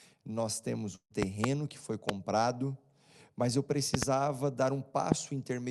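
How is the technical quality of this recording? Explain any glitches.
The speech has two kinds of glitch: one burst of packet loss and a series of loud pops. The codec's top end stops around 12 kHz, which fits a wideband call codec such as Opus at a moderate bitrate.

The burst of packet loss falls between 0.95 and 1.12 s, right after "nós temos" and before "que foi". The receiver ran out of audio, so it stretched the last sound for about 150 ms while fading it, with roughly 80 ms of that going silent. Playback then jumps ahead, and about 160 ms of speech is simply gone. This differs from the pops because nothing is added on top. The speech itself stalls and skips.

The loud pops come as four events: a double pop between 1.23 and 1.46 s just before "que foi", a single one between 2.09 and 2.11 s just after "que foi", a double between 3.94 and 4.05 s, and a single between 5.12 and 5.14 s. 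They stand roughly 20 to 25 dB above the speech. They are likely voltage spikes from a connector, switch or static discharge, shaped by the following circuitry into sharp clicks or thumps. Unlike the packet loss, the speech carries on uninterrupted underneath each pop.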